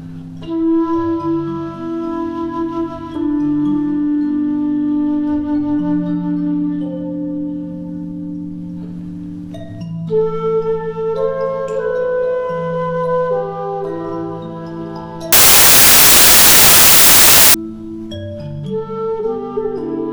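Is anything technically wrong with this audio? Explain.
Yes. From about 15.33 to 17.54 s there's a burst of samples built from the wrong bytes: the reader misassembles each sample's bytes, so the jittery low bits end up dominating the value. You hear loud, harsh noise there, close to white on the louder sounds.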